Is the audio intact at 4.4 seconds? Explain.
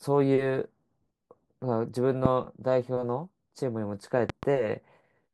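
No. From 4.30 to 4.45 s a loud pop, a pair of sharp thumps about 10 dB above the speech, sits on top of it. The likely cause is a voltage pulse from a plug, switch or static. Unlike a dropout, the speech continues underneath.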